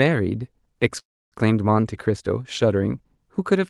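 Call audio freeze, 0.99 to 1.34 s: a fading tail then silence, likely delayed packets draining the jitter buffer, before resuming exactly where it stopped.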